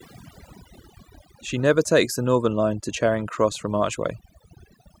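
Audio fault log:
Throughout: overdone noise removal. The noise reduction was set too hard on a noisy speech recording, so it shuts off individual frequency bands anywhere near its noise estimate and takes the quieter parts of the voice with them. The gaps drop away and break up into little twinkly specks.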